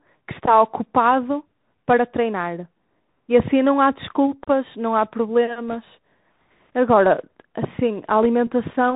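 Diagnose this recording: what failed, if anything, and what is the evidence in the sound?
The codec stage is at fault: the speech went through a Bluetooth CVSD headset codec, which fits a 64 kbps link coding one up-or-down bit per sample with an adaptive step. Nothing above 4 kHz survives, loud high sounds overrun the step and distort, s sounds turn scratchy, and a granular hiss sits under the speech throughout.

The radio link between headset and host also failed briefly, causing bit errors on the Bluetooth voice link at 5.69 to 5.76 s and again at 8.23 to 8.26 s, at error rates of around one and 1.5 percent. Each flipped CVSD bit nudges the waveform only slightly and the error decays, so there are no sharp clicks, just a short burst of rushing, crackly noise.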